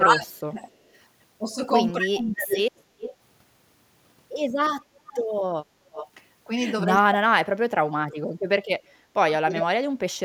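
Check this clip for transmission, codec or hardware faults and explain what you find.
Two faults are present: speech suppressed in double talk, and echo leak.

Speech suppressed in double talk occurs from 0 to 0.67 s, from 1.92 to 2.55 s, and from 6.86 s to the end. The voice sinks or breaks off in pieces, dropping by about 30 dB in the first two stretches and about 40 dB in the long final one. The likely cause is both parties talking at once. The echo canceller could not tell the near talker from the loudspeaker echo, so it attenuated everything.

Echo leak appears in short bursts at 2.51, 2.78, 2.99, 5.06 and 5.92 s. Each is a copy of the voice arriving 372 ms late. The first is loud, at about 5 dB below the speech. The others range from about 10 dB down to about 40 dB down. The likely cause is a far end on loudspeaker whose echo canceller let part of the microphone pickup through and sent it back.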